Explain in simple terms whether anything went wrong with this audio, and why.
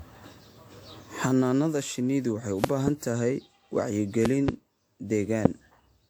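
Yes, two things went wrong.

The speech was most likely saved in a compressed format, opened, and saved again several times over, perhaps four times. Each save throws away slightly different detail and adds its own small errors, and these pile up. That is generation loss. Throughout the clip it makes the voice sound swirly, hollow and smeared, and the starts of sounds lose their crispness, more than a single save would cause.

Separately, sudden electrical jolts, likely from a plug, a switch, static or a glitch in the audio hardware, broke into the signal. Each one is a loud pop. You hear a quick double pop between 2.64 and 2.90 seconds, another double pop between 4.25 and 4.51 seconds, and a single sharp pop between 5.45 and 5.48 seconds. Each one sits on top of the speech, and the speech carries on underneath.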